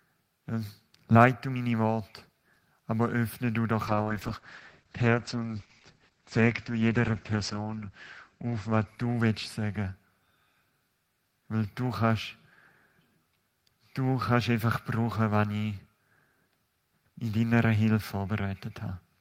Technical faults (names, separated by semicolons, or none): call bitrate drop